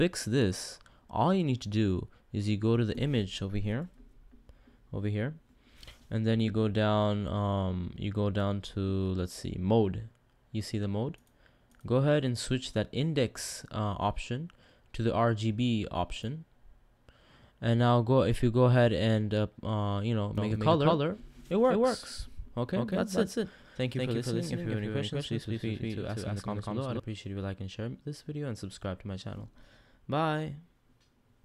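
Doubled audio track from 20.38 to 27.00 s: an equally loud, dry copy trails the audio by roughly 200 ms, likely from a slower second capture path.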